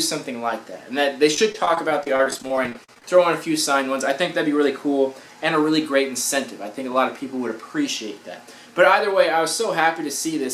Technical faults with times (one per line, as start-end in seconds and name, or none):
1.34-3.04 repeated packet loss (robotic sound)